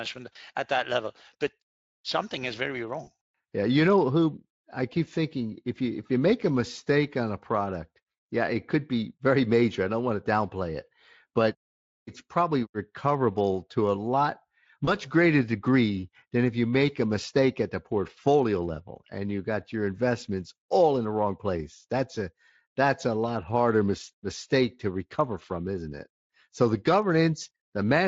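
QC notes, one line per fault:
0.33–0.36 s, 3.03–3.11 s and 14.85–14.89 s: VoIP packet loss concealed by the speech codec. Gaps of 20 ms, 40 ms and 20 ms occur just before "at that level but", between "but something is very" and "yeah you know who", and between "recoverable to a lot" and "greater degree than if". The decoder bridges each gap by extending its last pitch and spectral shape at falling gain, giving a short, fading smear. The speech right after stays weak or distorted while the decoder's state rebuilds. The surrounding Speex coding adds only light damage.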